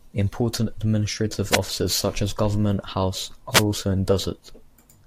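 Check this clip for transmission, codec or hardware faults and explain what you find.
Two wireless microphone noise hits, at 1.49–1.59 s and 3.51–3.64 s: the FM radio link briefly faded, letting receiver noise surge over the speech as short bursts of static.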